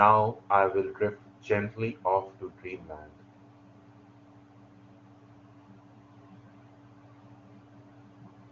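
No technical faults are audible.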